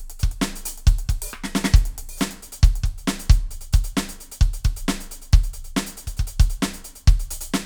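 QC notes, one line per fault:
No faults are heard in this music clip. Nothing in it calls for a QC note.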